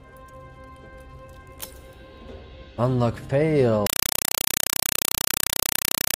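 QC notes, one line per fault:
3.87–6.18 s compressed stream played as audio: undecoded AC-3 data treated as samples, so harsh 4 ms noise bursts chatter at 31.25 per second.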